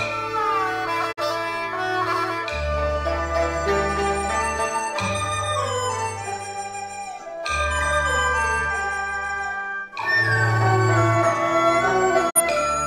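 Two brief digital broadcast dropouts break the audio, at 1.11 to 1.21 s and at 12.29 to 12.41 s. Each time the sound fades to silence over about 20 ms and returns roughly 43 ms of programme later, which fits a single corrupted frame being muted by the receiver. The quick fade-out and the missing stretch of material set this apart from a hard edit gap or a concealment glitch that smears the sound over.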